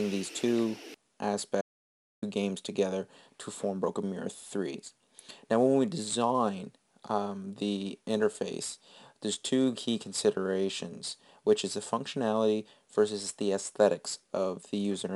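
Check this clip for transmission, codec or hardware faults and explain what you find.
One fault is present: an audio dropout to silence from 1.61 s to 2.22 s, lasting about 0.61 s. The sound stops abruptly mid-flow and resumes just as suddenly, and the gap holds silence with no room tone at all, so whatever occurred in that stretch is simply missing. The likely cause is the input being lost for that moment while recording carried on writing zeros. On a waveform it is a flat line; a spectrogram shows a clean black band across every frequency.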